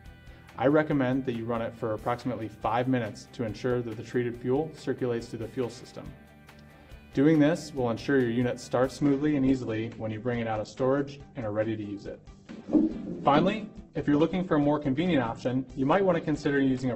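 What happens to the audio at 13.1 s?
At 13.1 s the audio is inside a stretch of adaptive stream at a lower bitrate, running from 8.98 s to the end. When the connection slowed, the player switched without a gap to a much leaner encoding, likely a drop from around 64 kbit/s to around 12 kbit/s Opus. The treble is dull, with nothing above 8.2 kHz, and codec artefacts are stronger. On a spectrogram the energy is cut off flat at 8.2 kHz from 8.98 s, while the waveform shows no break.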